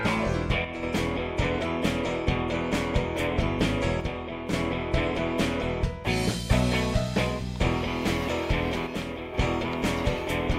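The audio takes three abrupt level dips of about 6 dB, each with the sound otherwise unchanged: 0.65 to 0.83 s, 4.00 to 4.53 s and 8.87 to 9.34 s, so roughly a fifth of a second, then about half a second twice. The likely cause is one channel dropping out, where one side of a stereo pair carrying the same material goes missing for a moment, so the mono sum loses half its level and then snaps back.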